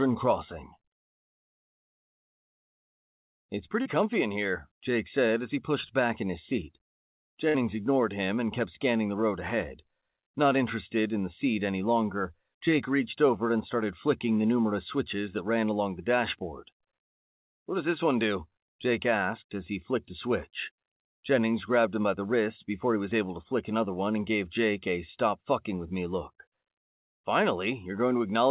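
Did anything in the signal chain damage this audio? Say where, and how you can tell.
Yes, and it happened on the network side of a call. At 3.82 to 3.87 s, just before "comfy in here", there's a brief smeared wobble where the audio stretches instead of moving on. That's short concealed packet loss: about 40 ms of audio never arrived in time, and the receiver covered roughly 32 ms of it by extending the last sound before blending back into the real signal.

The second one is bigger. From 7.49 to 7.56 s, right before "ignored him and kept", the sound hangs and fades instead of carrying on, then picks up further along with a bit missing. That's a burst of packet loss: about 60 ms went missing in a row, and the concealment held the last sound for about 50 ms and faded it down. The whole call has nothing above 4 kHz, which points to a narrowband telephone codec like G.711 on the call path.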